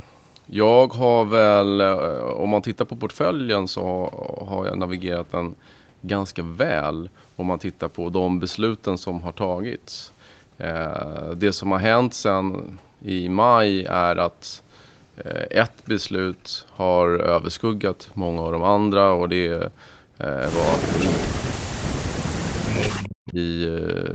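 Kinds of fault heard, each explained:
Echo leak: The far end's echo canceller likely let loudspeaker sound through, so a copy trailing about 226 ms behind, roughly 10 dB quieter, appears around 20.7 to 21.3 s.
Speech suppressed in double talk: The echo canceller likely mistook overlapping talk for echo, causing a slight dip near 20.9 s, then cutting the voice almost completely for about two seconds from 21.3 s.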